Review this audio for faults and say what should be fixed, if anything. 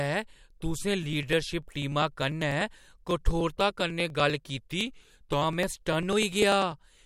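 Periodic USB or driver dropouts run from 1.03 s to 7.02 s. About every 0.099 s, roughly ten times a second, around a millisecond of audio is skipped outright rather than filled, so the waveform jumps and leaves a tick. The ticks are evenly spaced and sound only where there is signal, around seventy of them in all. To prevent this, find and stop the background task that blocks the USB bus or audio driver, or enlarge the driver buffer.

From 4.57 s to 5.42 s the speech slows by 5.55% and drops about 99 cents, almost exactly a semitone, then snaps back to normal speed and pitch. Speed and pitch move together, which points to a resampler changing rate in one jump. The likely cause is a drift correction step, where clock-matching software alters playback rate abruptly to refill or drain its buffer. To prevent it, configure the clock-sync software to apply small, gradual rate adjustments instead of single large steps.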